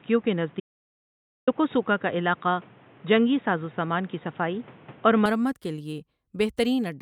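From the start to 5.26 s, the speech is boxy, with nothing above 3.8 kHz, a level about 5 dB different and its own noise roughly 30 dB down. It snaps back, with no gap, before "مرمت کے لیے". This is likely an input switched to a poorer device, since the tone, noise and level all change together. From 0.60 to 1.47 s, the sound cuts to about 0.87 s of silence with no room tone, which sets it apart from a pause. This is likely an audio dropout to silence.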